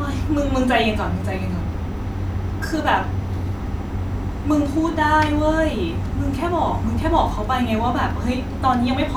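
Listening to the speech in this clip, nothing technical stood out as wrong.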